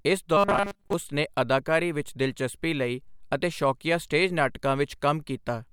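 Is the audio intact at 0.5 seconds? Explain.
No. At 0.5 seconds the speech turns into a rigid, metallic buzz at 200 Hz, robotic sound from repeated short buffers lasting from 0.37 to 0.93 s. It's likely caused by audio arriving too seldom, so a 5 ms buffer is replayed and most of the real signal is skipped.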